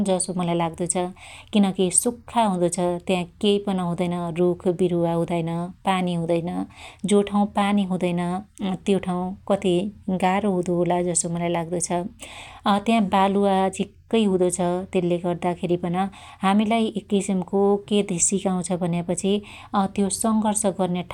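No technical faults can be heard anywhere in this speech recording.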